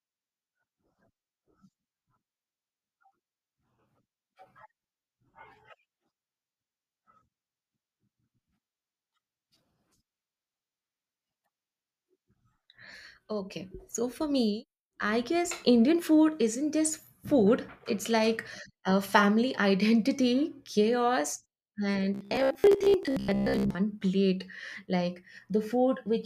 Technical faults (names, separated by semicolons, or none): robotic sound from repeated short buffers